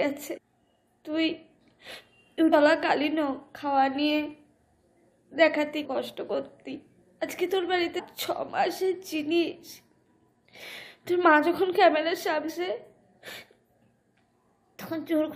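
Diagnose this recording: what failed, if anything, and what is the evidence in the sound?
The codec stage failed: damaged data in a compressed stream. Brief glitches come at 0.36–0.38, 2.52, 5.84–5.86, 7.98–8.00 and 12.48–12.50 s. Corrupt frames make the decoder lose sync and hunt for the next header.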